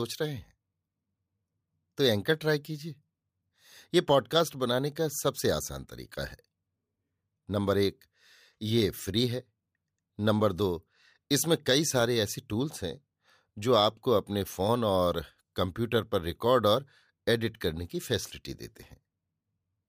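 No technical faults are audible anywhere in the recording.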